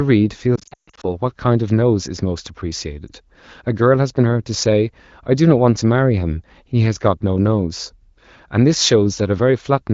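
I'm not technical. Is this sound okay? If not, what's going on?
No. Radio errors corrupted pieces of the phone call's speech data, so these were lost AMR speech frames. The decoder guessed to fill the gaps. From 0.56 to 1.05 s the speech warbles and briefly fades, and there is a shorter dip from 3.07 to 3.11 s.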